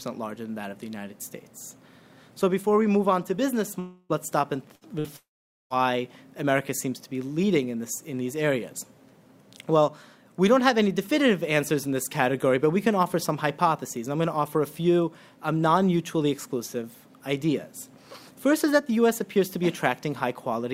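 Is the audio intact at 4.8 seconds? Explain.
No. From 4.75 to 4.84 s the last sound is briefly held and fades out, then the audio jumps ahead with about 60 ms missing. This is a burst of packet loss: the receiver extended the final audio it had for about 58 ms.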